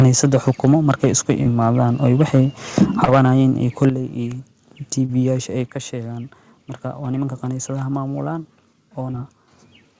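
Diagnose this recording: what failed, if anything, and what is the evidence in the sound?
Harsh, crackly peaks from 0.0 to 1.32 s, 2.05 to 2.41 s, 2.78 to 3.41 s and at 3.81 s, likely microphone overload: the converter input is driven about 2 to 7 dB past full scale and the tops get flattened.

Microphone volume stepped down at the converter input stage: the level drops about 3 dB at 0.02 s and about 7 dB at 3.9 s, likely the call processing pulling gain after those clipped peaks.

Short concealed packet loss on the network side at 1.43, 3.05, 5.05 and 9.11 s: roughly 30 ms gaps each get a brief smeared fill extrapolated from the preceding sound, then crossfade back.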